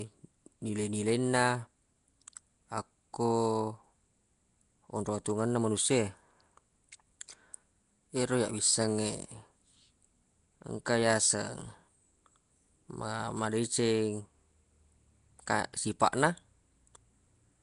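From start to finish the speech carries a rough, hissy halo and a smeared, underwater blur. Nothing is heard above 10.6 kHz. This is likely Nellymoser compression, which fits a bitrate around 44 kbps. Weak bands get no bits and are refilled with noise.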